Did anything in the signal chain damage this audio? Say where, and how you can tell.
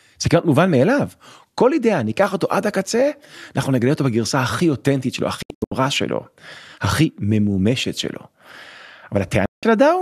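Yes: digital broadcast dropout at 5.42 to 5.72 s and 9.46 to 9.63 s, in the reception and decoding stage. The speech mutes with about 3 ms fades, first as short holes of up to 72 ms, then one 168 ms gap. This fits 24 ms frames failing their checks and the receiver muting until good frames returned.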